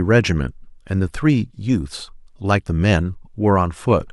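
No technical faults occur at any point in the speech, so there is nothing to describe in time order.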